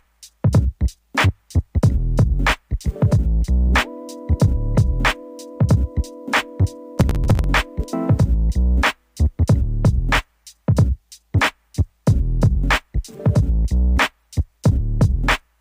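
From 6.98 to 7.44 s, processor overload crackle: the processor misses deadline after deadline on buffers of around 5 ms, skipping about twenty, so the sound turns gritty and torn. The waveform shows rapid hard-edged gaps; the spectrogram, dense thin vertical broadband streaks.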